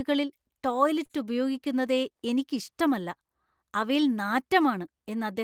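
A speech clip with a short stall from a late packet at 1.05 to 1.25 s, just before "ഉപയോഗിക്കുന്നതേ എനിക്ക് ഇഷ്ടമല്ല": about 41 ms of sound is stretched while waiting, then resumes intact, showing as flat, smeared harmonics on a spectrogram.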